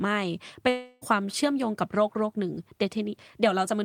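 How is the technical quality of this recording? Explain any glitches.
One glitch stands out in the speech. Long network dropout, 0.69 to 1.03 s: packets likely never arrived, so a fading buzz fills 0.32 s, and that stretch of speech never returns.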